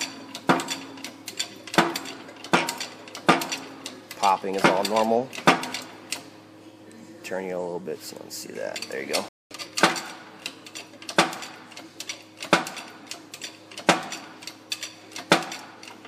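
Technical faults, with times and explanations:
9.29–9.51 s, playback stall: the sound just drops out mid-flow for about 223 ms, then picks back up. The player most likely ran dry of buffered data or had its thread held up, so there was nothing to send out until it recovered.
9.51–9.73 s, time-compressed catch-up: right after the gap the sound comes through hurried, at roughly double speed but still at its normal pitch. The player is trimming its backlog by snipping out small slices and cross-fading the joins.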